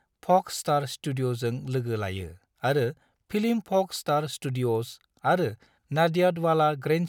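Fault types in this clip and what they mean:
No faults detected in the speech.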